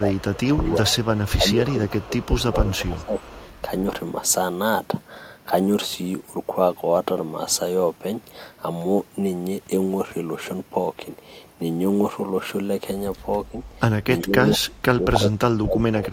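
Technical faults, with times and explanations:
0.00–0.71 s and 1.39–3.18 s, speech suppressed in double talk: the speech dips by about 10 dB in patches, likely an echo canceller ducking the talker while the far side also spoke.
0.13–1.32 s, 1.87–2.25 s and 2.66–3.62 s, echo leak: a faint copy of the speech trails 369 ms behind, about 20 to 25 dB down, likely from loudspeaker echo that the canceller did not fully remove.
13.51–13.58 s and 14.22–16.13 s, speech suppressed in double talk: a brief dip of about 5 dB, then deeper cuts of up to about 25 dB over roughly a second and a half, likely caused by overlapping talk triggering suppression.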